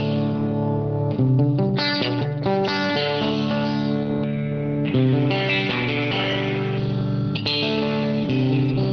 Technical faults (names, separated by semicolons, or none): none